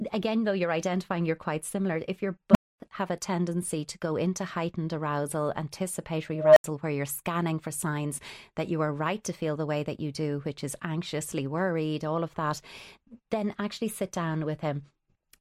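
Speech, with two bursts from an unstable filter: at 2.51 to 2.80 s a low tone near 200 Hz swells in about 36 ms, then drops to silence for 250 ms, and at 6.34 to 6.64 s a 700 Hz-ish squeal builds over about 0.23 s before an 80 ms gap, as runaway feedback overflows and resets.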